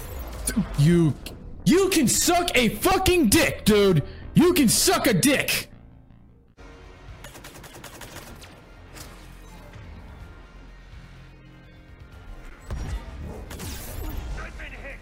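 An underrun with held sample occurs at 12.50 s. For about 12 ms the output buffer ran dry and the converter simply held its last sample value, so the waveform flattens into a brief stall. That gap length fits a 512-sample buffer. Essentially no audio was lost during the stall, so playback resumes exactly where it paused.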